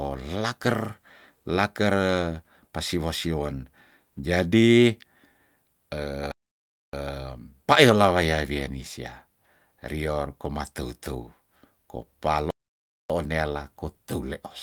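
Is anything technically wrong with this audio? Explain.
Yes, the speech drops out twice in playback stalls: silence from 6.32 to 6.93 s and from 12.51 to 13.10 s, each about 0.6 s, likely because the player ran short of data before resuming.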